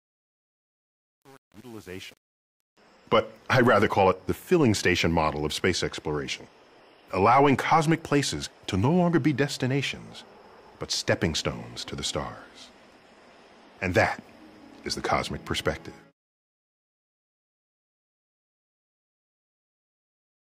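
Right from the start, 0.0 to 2.77 s, the fade-in carries truncation distortion: the gain stage keeps only about 7 bits with no dither, so the quiet opening turns into coarse square steps and sounds gritty, easing only as the level climbs.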